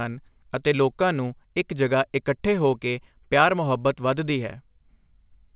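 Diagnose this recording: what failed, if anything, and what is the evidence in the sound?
Nothing in this speech recording points to a failure at any stage. What can be heard of the telephone path fits G.711 mu-law coding at 8,000 samples a second: the band stops at 4 kHz, and a faint hiss rides about 38 dB under the speech and follows its level.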